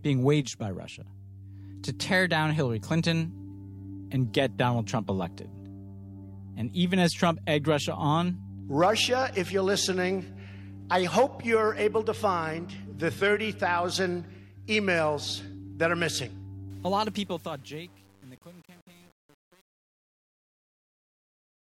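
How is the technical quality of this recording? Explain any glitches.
One glitch stands out, in the closing fade-out that begins around 16.7 s. Truncation distortion on a fade runs from 16.70 s to 21.72 s. The fade stage rounds off low-order bits without dither, which fits an 8-bit stage. From 16.82 s, the decaying signal collapses into coarse square steps, sounding gritty.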